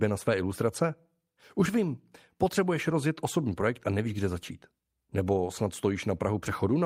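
Nothing goes wrong anywhere in this bit of speech, so there's no technical fault to point to at any moment.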